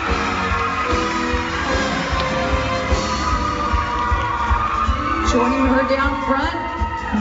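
Nothing is technically wrong with this audio.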